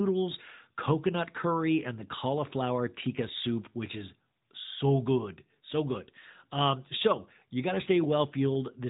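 Throughout the speech, the signal has passed through the AMR narrowband mobile codec, which resamples to 8 kHz and rebuilds the voice from a vocal-tract model fed by sparse pulses. Nothing above 3.8 kHz survives, and the plainly audible buzzy, synthetic edge fits a mid-range rate near 10.2 kbps.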